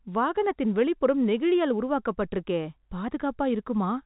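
No technical faults can be heard in this speech recording, which carries the narrow band of G.711 A-law telephone coding, with nothing above 4 kHz and at most a faint quantisation hiss that follows the signal's level.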